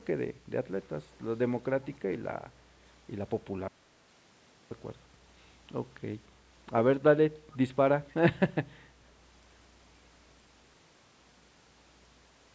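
At 1.83 to 1.87 s there is an echo leak. The far end was likely playing the call through a loudspeaker, and its echo canceller let a small part of that playback slip back into its microphone and return down the line. The result is a brief, faint copy of the speech arriving about 297 ms behind the original, very quiet and far below the direct voice. It is only a short scrap of delayed sound rather than a sustained repeat.

From 3.68 to 4.71 s comes an audio dropout to silence. The input signal was likely lost, through a link failure or a momentary mute, while the recording carried on writing silence. The speech stops abruptly and resumes about 1.03 s later, and the gap is dead silence with no room tone at all. Whatever was said during that second is simply missing, and the band-limited call sound, with nothing above 8 kHz, returns unchanged afterwards.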